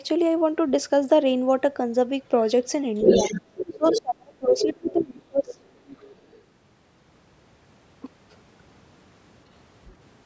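Other side's voice leaking through, from 2.97 to 4.01 s, is a second voice only slightly quieter than the talker, likely left over from loudspeaker echo the canceller failed to remove. Speech suppressed in double talk runs from 3.69 to 5.59 s: the talker's voice dips deeply, by something like 35 dB at worst, likely because the canceller turned everything down while both sides spoke. During and after that dip the leaking voice returns at 4.55 to 5.05 s, as a faint scrap at 5.50 to 5.54 s, and much more faintly from 5.88 to 6.41 s. Throughout, the call's microphone processing limits the sound to below 8 kHz.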